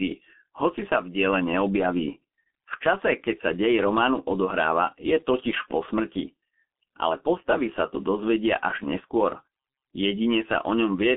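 Throughout the speech, G.723.1 codec damage is heavy. Nothing survives above 3.6 kHz, leaving a narrow 200 Hz to 3.4 kHz phone band, and the slow model updates blur consonants into a muffled, hoarse rasp that plain band-limiting wouldn't cause, fitting a bitrate near 6 kbit/s.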